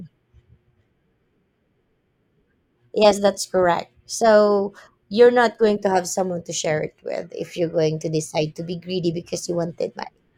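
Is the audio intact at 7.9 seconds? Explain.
Yes, the audio at 7.9 seconds is intact, with no audible dropout, click, distortion or other fault at that moment.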